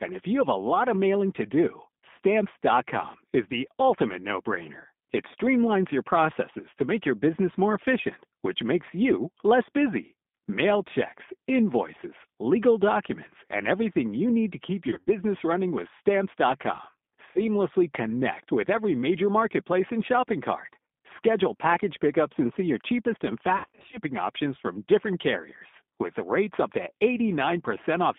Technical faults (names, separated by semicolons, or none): G.729 codec; VoIP packet loss concealed by the speech codec